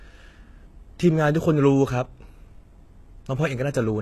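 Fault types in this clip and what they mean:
HE-AAC compression: the speech carries plainly audible codec damage throughout, with nothing above 12.3 kHz and a treble that sounds synthesised, gritty and lispy on s sounds. This is likely spectral band replication copying lower bands upward, at a rate consistent with roughly 16 kbps.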